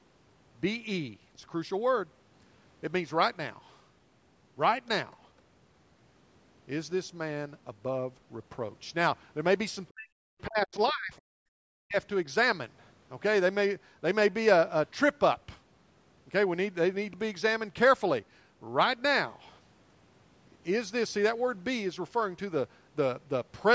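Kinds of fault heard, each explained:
Speech suppressed in double talk: The voice sinks, dropping by roughly 40 dB at its deepest for about a second between 9.9 and 11.13 s, then again more briefly from 11.63 to 11.96 s. This is likely an echo canceller facing both parties talking at once. Unable to tell the near talker from the loudspeaker echo, it turned everything down together.
Other side's voice leaking through: A faint scrap of a second voice, very low at around 40 dB below the main speech, flickers in at about 11.2 s, lasting only a few hundredths of a second, right between the two dips. It likely comes from the far party playing on the talker's loudspeaker and being picked up by the microphone, with the echo canceller failing to remove that fragment completely.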